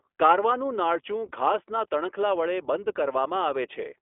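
From start to finish the speech runs through the iLBC codec, confined to a telephone band of roughly 300 Hz to 3.4 kHz. Each short frame, consistent with 20 ms at about 15 kbps, is coded independently, leaving a plainly audible rough, synthetic texture.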